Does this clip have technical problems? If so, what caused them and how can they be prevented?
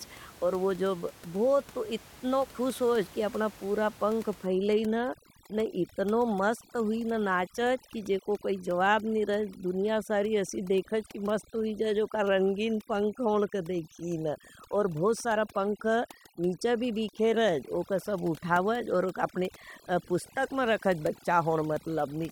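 Yes. From 4.46 s, just after "अपना पूरा पंख", to the end at 22.32 s, the speech has overdone noise removal. The reduction is too aggressive for room noise sitting only about 22 dB below the speech. It cuts individual frequency bands whenever they approach its noise estimate, taking the quiet parts of the voice with them. The result is a background that drops and breaks up into twinkling specks. On a spectrogram the background breaks into scattered isolated dots, and the weaker harmonics look patchy and torn. Prevent it by using a gentler reduction setting or lowering the room noise at the source.

At 17.49 s there is a single sharp click, likely from dropped samples: a handful of samples, well under a millisecond, went missing, so the waveform jumps abruptly from one value to a later one. Too little is lost to remove any sound, so only the click remains. On a waveform this appears as a small step discontinuity, and on a spectrogram as a thin vertical line running across all frequencies. 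Prevent it with adequate buffering and a stable clock in the recording and processing chain.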